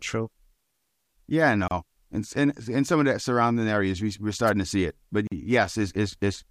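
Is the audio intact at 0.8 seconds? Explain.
Yes, the speech at 0.8 seconds is intact, with no fault at that moment.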